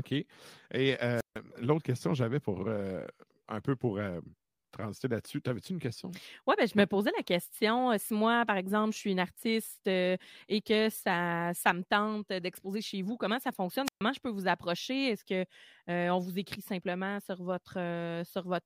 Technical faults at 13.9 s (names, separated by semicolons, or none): wireless microphone squelch dropout